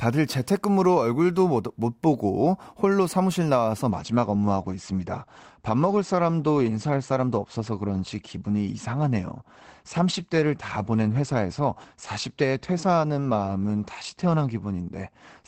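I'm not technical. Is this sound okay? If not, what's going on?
No. From about 3.9 s until the end, the speech becomes duller. This is an adaptive stream switching to a lower bitrate: when the connection slowed, the player moved to a smaller, lower-quality version of the same audio to keep it flowing. To save space, that version discards everything above about 8.6 kHz, which removes the crisp edge of the voice, and it adds more codec artefacts. The change is abrupt, with no gap or pause.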